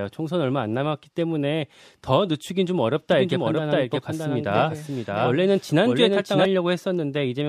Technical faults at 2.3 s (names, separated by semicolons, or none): none